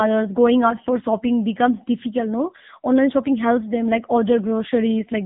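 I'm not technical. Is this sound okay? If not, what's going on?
No. Throughout, the speech has the AMR narrowband mobile codec sound: nothing above 3.8 kHz, plus a buzzy, synthetic edge that simple muffling wouldn't add.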